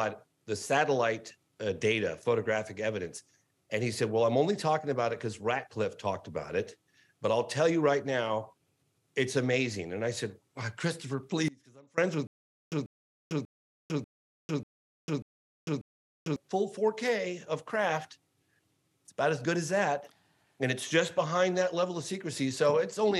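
The audio has two faults close together. From 11.48 to 11.98 s there is an audio dropout to a faint residue. The sound cuts out abruptly for about half a second, leaving only a faint trace well below the normal level. The break was likely in the signal feed while the later stages stayed live. On a waveform it looks like a sudden collapse to a thin band, and a spectrogram shows a dark vertical slot with faint energy still inside. Then, from 12.27 to 16.36 s, comes a stutter with silent gaps. A 0.14 s fragment plays seven times, each followed by 0.45 s of digital silence, repeating every 0.59 s. This pattern is likely from a player or stream stalling and replaying its last buffer. The waveform shows evenly spaced identical blocks separated by flat silent stretches, and the spectrogram shows matching repeated slices divided by dark gaps. The audio that should have played during those gaps is lost.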